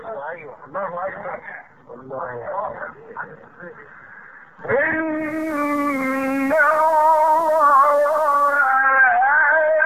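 From 5.13 s to 8.90 s the audio takes on a layer of hiss, about 30 dB below the signal, fading in over roughly half a second and fading out just as gradually at the end, with no step in level. This is digital radio blending to analogue: the hybrid receiver lost its digital stream and cross-faded, over about 0.48 s, to the FM broadcast of the same station. The FM path carries the hiss. Once the digital signal returned, the receiver blended back.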